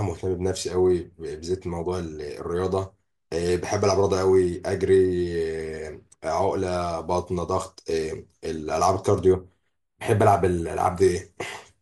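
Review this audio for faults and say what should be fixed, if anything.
Channel delay (comb filtering), 9.33 to 11.01 s: one channel lags roughly 0.1 ms before mono summing, notching evenly from around 5 kHz, so the speech sounds hollow.

Keep both channels sample-aligned through the chain, or check and correct interchannel delay before folding down to mono.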